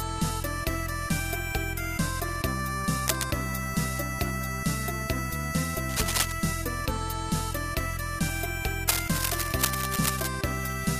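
Three bursts of cable scratch noise cut across the audio, at 3.08 to 3.28 s, 5.89 to 6.32 s and a longer one from 8.89 to 10.28 s, each a rough, crackly rustle about as loud as the sound itself, likely from a worn cable or connector being moved.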